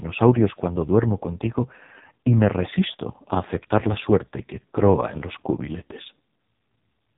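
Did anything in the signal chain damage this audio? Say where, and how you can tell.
Yes, at the codec stage: AMR narrowband mobile codec damage throughout, with nothing above 3.8 kHz and a heavily buzzy, synthetic timbre from sparse-pulse vocal-tract modelling, which fits the lowest 4.75 kbps mode.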